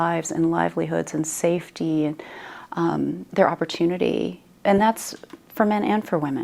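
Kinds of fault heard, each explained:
corrupt frame decoded: damaged bits inside compressed frames reached the decoder, which played them as if valid, so misread codes and gains put energy at frequencies where none belonged. Here it happens twice: a brief blip at 1.57 s, consistent with a single bad frame and peaking around -25 dBFS, then a louder burst from 4.78 to 4.81 s, whose length points to a handful of consecutive frames, reaching roughly -15 dBFS.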